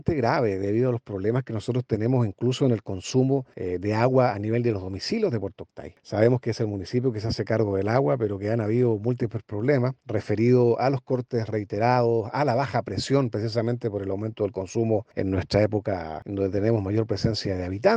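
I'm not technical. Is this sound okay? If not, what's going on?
Yes, it's fine; nothing here needs fixing.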